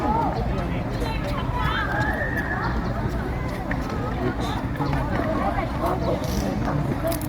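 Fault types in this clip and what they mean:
Loud pop: two single sharp thumps land on top of the sound, one at 5.76 to 5.80 s peaking around 5 dB above it, and a stronger one at 6.65 to 6.69 s around 10 dB above. Each lasts roughly 40 ms, likely from a voltage pulse such as a switch, plug or static discharge. Unlike a dropout or a cut, nothing is lost; the sound carries on underneath each pop.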